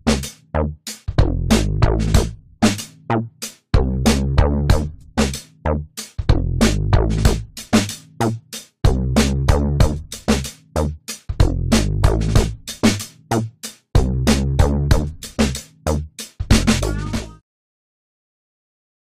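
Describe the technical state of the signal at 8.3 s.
At 8.3 s the signal is intact, with no technical fault present at that moment.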